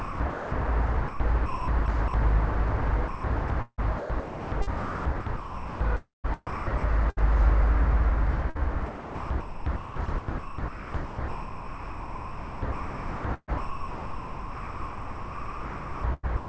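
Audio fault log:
0.00–0.52 s, 1.46–2.14 s, 3.08–8.59 s and 8.86–16.49 s, sound chopped by the voice detector: the sender's voice detector likely kept switching transmission on and off, so quieter parts of the everyday sound were swapped for synthetic comfort noise. About 0.42 s, 0.3 s, 2.1 s and 6.3 s are replaced in these stretches. The sound turns choppy, with holes where it was swapped out.
1.08–1.20 s, sound dropped by the voice detector: a quiet passage was likely judged to be background, so sending stopped and the receiver filled the gap with comfort noise. For 0.12 s the real sound is gone, replaced by steady noise, and it returns when transmission resumes.
7.10–8.57 s, repeated packet loss (robotic sound): inside the chopped stretch, three separate holes appear in the stream, the longest lasting 70 ms. Each hole is patched by stretching the preceding sound, about 125 ms of fill against 140 ms missing, roughly 8% of the span. 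The repeated patching gives choppy sound with pieces missing. It sits on top of the call codec's band limit, which leaves nothing above 8 kHz.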